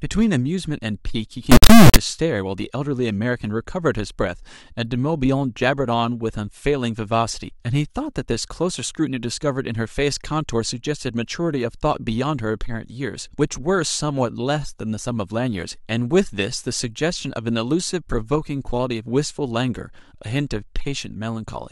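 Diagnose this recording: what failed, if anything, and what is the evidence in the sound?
A sample-format conversion fault: integer read as float, from 1.52 to 1.96 s. The speech turns into a harsh, extremely loud square-wave buzz that fits 32-bit integer samples being read as 32-bit floats. Unlike ordinary clipping, which flattens only the peaks, the output jumps between silence and the clipping limit.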